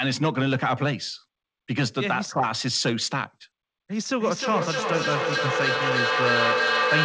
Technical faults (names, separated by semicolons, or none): feedback echo between two devices